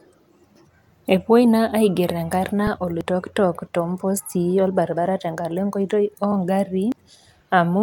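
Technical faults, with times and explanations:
1.05, 3.01, 4.97 and 6.92 s, audio missing between chunks: the speech skips forward abruptly four times, each a small jump, about 2 s apart. One lands just after "naa aiger enkarna" and one just before "tenkala enkoitoi oo". Each loses roughly 40 ms, with the two sides butted together and no silence between. The regular 2 s spacing points to a recorder or processor working in 2 s chunks, likely dropping a sliver of sound at each handover.
6.32 s, underrun with held sample: just after "tenkala enkoitoi oo" the sound briefly freezes for 0.67 ms, a tiny flat step rather than a skip, with little click. The output buffer ran dry and the converter held its last value until data arrived again, which fits a gap of about 32 samples. Playback then picked up where it stopped, so no speech is missing and the join stays soft.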